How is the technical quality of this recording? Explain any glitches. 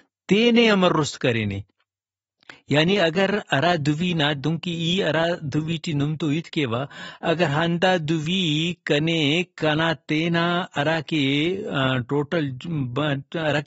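The recording has plainly audible compression damage throughout the speech. From start to finish it sounds dull and smeared, with a warbling, fizzy texture on sustained sounds and sibilants and nothing above 7.7 kHz. This is likely AAC compression at a low bitrate, near 30 kbps: the encoder quantises coarsely, lowers its cut-off and leaves spectral holes.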